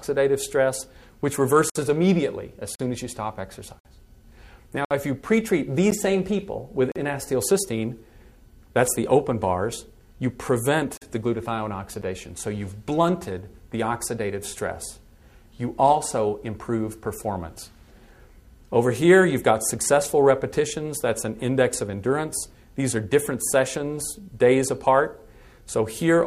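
At 1.70 to 1.76 s, 2.75 to 2.80 s, 3.79 to 3.85 s, 4.85 to 4.91 s, 5.91 s, 6.92 to 6.96 s and 10.97 to 11.02 s, the sound drops out abruptly: gaps between stream segments. Roughly one-second segments are joined with their time stamps slightly apart, so the player inserts silence, from about 12 to 60 ms, and nothing is lost. The waveform shows flat silent stretches with hard edges, and the spectrogram shows thin, fully blank vertical bands at near one-second spacing.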